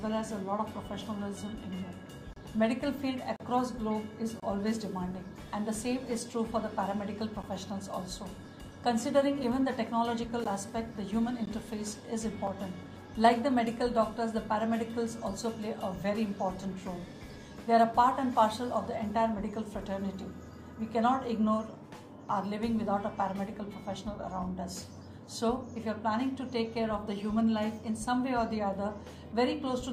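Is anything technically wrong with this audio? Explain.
Yes. There are gaps between stream segments at 2.33–2.36, 3.36–3.40, 4.40–4.43, 7.43, 9.44, 10.44, 11.46 and 12.47 s, lasting 3 to 36 ms on a 1.0 s segment grid. Timestamp mismatches leave holes that the player fills with silence, heard as hard-edged dropouts.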